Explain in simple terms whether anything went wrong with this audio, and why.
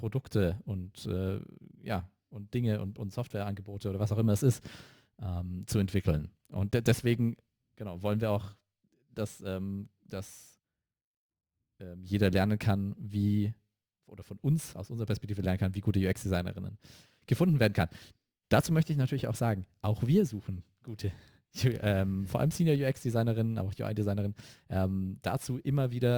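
Crude rate conversion runs throughout. Samples were repeated without smoothing, which fits a 32 kHz to 44.1 kHz change. Loud, bright speech gains a faint, gritty fizz.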